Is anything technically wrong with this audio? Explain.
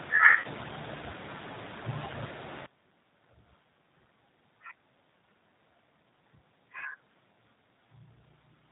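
Yes, there are three problems.

Throughout the clip, the speech has the rough, slightly synthetic quality of the G.729 codec, which points to an 8 kbit/s coder. The codec rebuilds each 10 ms frame from a vocal tract filter, a pitch predictor and a few pulses, and discards everything above 4 kHz. Unlike plain low-pass filtering, which only dulls the sound, this leaves a grainy, buzzy texture inside the band that remains.

From 0.40 to 0.46 s, there is VoIP packet loss concealed by the speech codec. About 40 ms of audio, consistent with two 20 ms packets, went missing. The decoder filled the gap by extending its last pitch and filter settings at falling gain, so the sound smears into a brief buzzy tone or coloured noise that fades. The speech stays weak for a moment after the packets resume. A plain dropout would instead give a hard gap of silence.

From 2.66 s to the end, the sound drops by about 25 dB, with its centred content largely gone. 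The likely cause is one channel inverted, so that material common to both channels cancels when they are summed to mono, leaving only their faint difference. A gain fault would lower everything evenly. Here only a faint difference copy remains, which points to cancellation rather than a simple drop in level.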